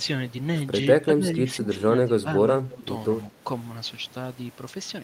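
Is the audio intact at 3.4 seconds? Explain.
No. From 3.28 to 3.44 s the speech is pulled down by speech suppressed in double talk: for around 150 ms the level sinks by roughly 10 dB, so the talker briefly dips in level. The likely cause is an echo canceller that couldn't tell this talker from loudspeaker echo while both sides spoke and attenuated everything. On a waveform the envelope visibly pinches in; a spectrogram shows the energy fading across that band.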